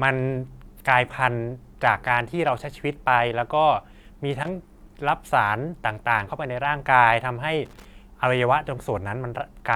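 A brief, irregular burst of scratchy crackle cuts through the speech from 4.33 to 4.48 s, and a second, slightly longer one follows from 7.65 to 7.85 s. Both are loose connector crackle: a worn or dirty contact somewhere in the cable path was shifting, so the connection kept making and breaking within those 0.15 s and 0.2 s windows. That chopped the signal into fragments, giving the ragged scratching texture.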